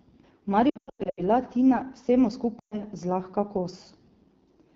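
The whole clip carries AMR wideband (HD Voice) codec damage. The speech sounds rough and raspy throughout, which points to one of the lowest modes, around 8.85 kbit/s. At that rate the pulse-driven vocal tract model cannot keep the voice clean.

From 0.70 to 1.22 s there are lost AMR speech frames. Losses are scattered over about 480 ms, totalling about 360 ms, with runs up to 100 ms. The decoder repeats stale settings with falling gain, so the speech warbles and dips. From 2.60 to 2.82 s, 120 ms of lost frames fade quickly toward silence and the voice returns rough.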